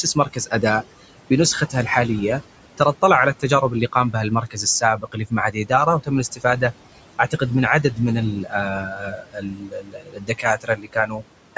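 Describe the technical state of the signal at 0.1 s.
At 0.1 s you're inside a stretch of speech cut by the noise suppressor, running from 0.03 to 0.53 s. The suppressor mistook the soft opening sounds for noise and pulled them down by up to about 11 dB, so roughly 150 ms of the onset comes out swallowed and faint.

Over that sits the general noise suppressor artifacts. The steady room noise, normally about 16 dB under the speech, gets pushed down about 18 dB between syllables and comes back underneath them.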